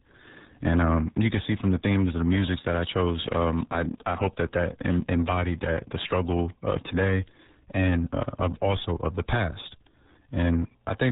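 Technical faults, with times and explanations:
Throughout: RealAudio 14.4 codec. Content stops at 3.8 kHz, so the speech sounds muffled and dull. Heavy coding damage adds a gargly, smeared texture, which fits an 8 kbit/s dial-up-era codec that discards most spectral detail to fit the bandwidth.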